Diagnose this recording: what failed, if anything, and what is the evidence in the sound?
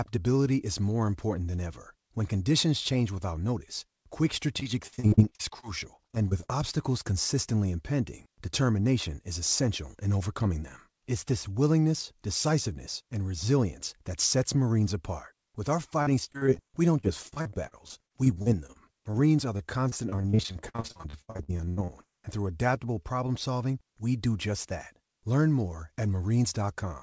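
Repeated packet loss (robotic sound) at the network and jitter-buffer stage: choppy stretches run from 4.60 to 6.50 s, just after "change without notice quick", from 16.02 to 19.15 s, and from 19.57 to 22.05 s, ending before "and through adaptable problem". Lost packets were patched by extending the preceding sound, covering about 16 to 34% of each span, with holes up to 80 ms. On a spectrogram, which stops at 8 kHz as a G.722 wideband path would, these appear as frequent vertical breaks and smeared, flattened harmonic blocks.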